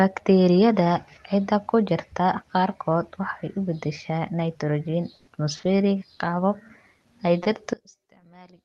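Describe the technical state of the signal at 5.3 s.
Around 5.3 s the signal is just leaving a burst of packet loss spanning 5.15 to 5.29 s. Roughly 120 ms of audio never arrived, so the receiver stretched the last sound into a fading buzz or hiss rather than going silent. That concealment is what separates it from a plain dropout. Speech resumes further on, with that stretch missing, still carried by the call path's roughly 12 kHz bandwidth.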